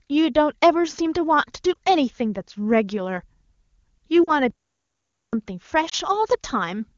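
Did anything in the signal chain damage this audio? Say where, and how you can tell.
Yes. Over the radio link, corrupted frames failed their checks and the AMR-WB decoder concealed them as lost AMR speech frames. It stretched the last good pitch and vocal-tract shape with falling gain. You hear brief dips or warbles at 1.74–1.76 s and 5.89–5.94 s, each fitting one 20 ms frame. A longer one at 4.23–4.32 s lasts about 40 ms, consistent with two consecutive frames.

At the playback stage, a playback stall cuts the speech mid-flow into silence from 4.50 to 5.33 s, roughly 0.83 s, before it resumes. The player most likely ran short of buffered data, or its output thread was blocked, so nothing reached the output until it recovered.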